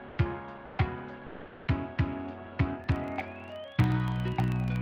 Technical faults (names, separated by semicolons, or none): comfort noise in place of the background; filter restarted on every block